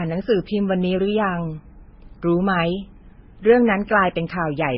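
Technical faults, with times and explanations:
Throughout, transcoding between lossy codecs: the speech was likely squeezed through a low-bitrate codec and then re-encoded, which fits MP3 near 16 kbit/s followed by Vorbis near 24 kbit/s. Nothing survives above 5.6 kHz, and both codecs' smearing and warbling artefacts stack.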